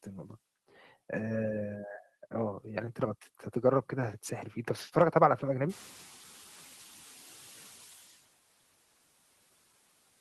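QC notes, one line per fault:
5.69–8.01 s, noise suppressor catching up: the room noise jumps by about 18 dB at roughly 5.5 s and passes through under-reduced. Over 2.32 s the suppressor's estimate adapts and cuts it by about 8 dB. Unlike gain pumping, the noise sinks once and stays down.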